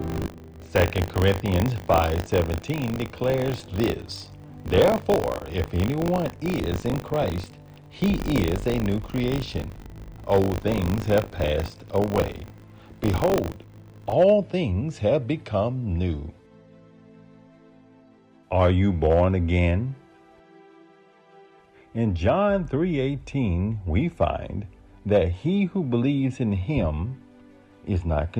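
From 0.0 to 14.13 s, a robotic 50 Hz rattle. This is buffer tearing: each period splices in a small slice of audio about 40 ms old.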